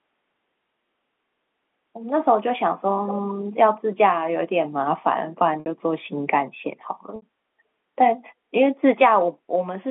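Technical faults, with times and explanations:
3.07 to 3.33 s, echo leak: for about a quarter of a second a faint copy of the speech trails the direct sound by about a quarter of a second (240 ms), sitting roughly 15 dB below it, so it reads as a ghostly repeat rather than a second talker. The likely cause is a far end playing the call through a loudspeaker, where the echo canceller failed to scrub out everything its microphone caught, and the leftover was sent back down the line.
5.6 s and 7.16 s, packet loss with pitch repetition: at each point the speech briefly freezes into a buzzy tone that fades into silence within the 60 ms gap before carrying on, heard twice in the same way. That length points to three consecutive packets going missing each time. The receiver covered each gap by looping the last pitch cycle it had and letting it fade, then cross-fading back into the real speech once packets arrived again, which is what gives the brief, fading buzz.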